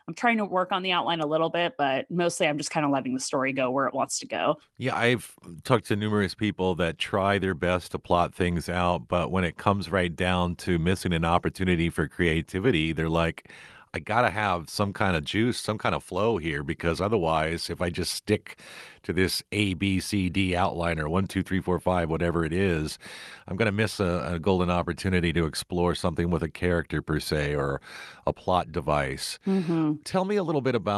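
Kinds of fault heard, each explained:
No faults are audible in this speech; it carries the ordinary coding character of a WebRTC call path, which sounds like Opus, with its high end stopping at about 12 kHz, as that path's bandwidth would give.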